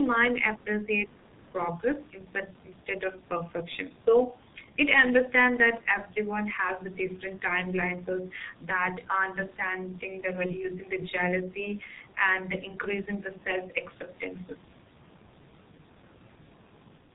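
G.723.1 codec, throughout: heavy low-bitrate coding, consistent with the 6.3 kbit/s mode, cuts everything above 4 kHz and smears consonants, leaving the speech muffled and hoarse.

VoIP packet loss concealed by the speech codec, 10.46 to 10.52 s: about 30 ms of audio goes missing, which points to a single lost frame. The decoder fills the gap with a fading extrapolation of the last pitch and filter that stays distorted briefly after.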